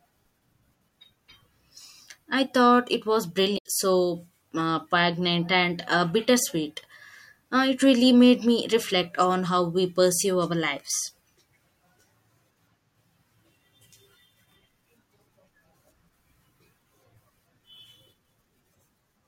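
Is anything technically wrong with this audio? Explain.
Yes. At 3.54 to 3.66 s, between "I thought it was" and "so uh poignant and", a brief glitch cuts through the speech. This is damaged data in a compressed stream: corrupted bytes made the decoder misread frames and resync.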